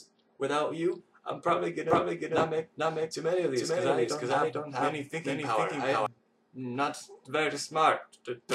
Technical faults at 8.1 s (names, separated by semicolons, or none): none